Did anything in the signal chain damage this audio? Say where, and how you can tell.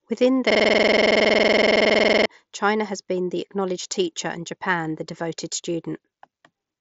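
Yes. A system hang loop occurs at the driver and buffer stage from 0.50 to 2.26 s. One 46 ms slice of speech repeats exactly at 21.5 Hz, which fits a 2048-sample ring buffer. On a waveform it shows as identical copies, and on a spectrogram as evenly spaced vertical stripes.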